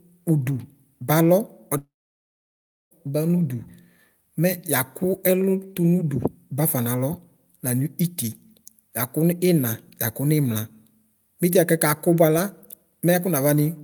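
A speech clip with a long network dropout from 1.77 to 2.93 s: the last sound smears into a brief fading buzz, then about 1.03 s of silence, and speech resumes with roughly 1.14 s missing, likely from packets lost in transit.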